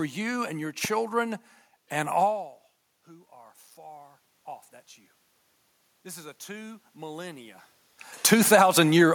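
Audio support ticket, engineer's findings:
Single sharp loud pop at 0.85 to 0.87 s, a few dB above the speech, which continues underneath. Likely an electrical transient, such as a connector, switch or static discharge, injecting one voltage spike that the downstream circuitry briefly shapes.

Automatic gain rising from 3.05 to 4.29 s: speech and room noise swell together by 4 dB over just over a second. The AGC detected input about 24 dB quieter and ramped its gain up, following the talker moving back around 2 s.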